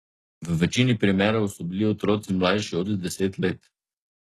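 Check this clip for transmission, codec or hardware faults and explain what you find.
One codec fault runs through the whole speech clip. HE-AAC compression, start to finish: the upper spectrum is likely rebuilt by band replication, lower harmonics copied upward under a coarse envelope, which fits a bitrate near 16 kbps. S sounds turn gritty and lispy, and nothing remains above 12.3 kHz.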